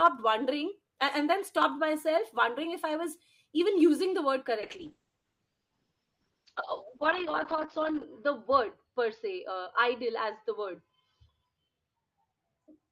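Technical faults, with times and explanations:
4.61 s to end, call bitrate drop: encoder rate falls from 32 to 8 kbps, coding coarsens and bandwidth narrows from 20 kHz to 8 kHz, sounding rough and muffled.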